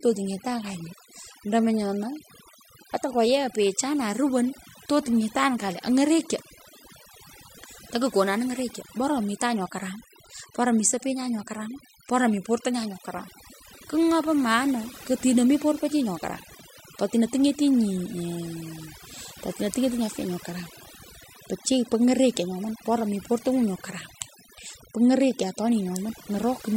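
Overdone noise removal throughout: an over-aggressive reducer cuts bands near its noise estimate, leaving near-silent gaps with twinkling specks.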